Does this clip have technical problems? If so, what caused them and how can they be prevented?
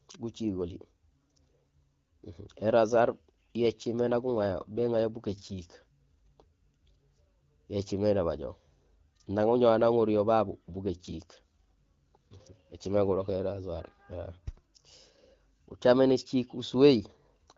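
Yes. An AMR rate drop occurs from 2.89 to 6.46 s and again from 10.50 to 13.69 s. The speech turns rougher and more synthetic while the band and continuity stay intact, which fits the AMR-WB codec stepping down from 12.65 to 8.85 kbit/s. Fewer bits are left to model the voice because the rest go to error protection on a weakened radio link. A stronger, more stable radio connection, such as better coverage or Wi-Fi calling, keeps the network from lowering the codec rate.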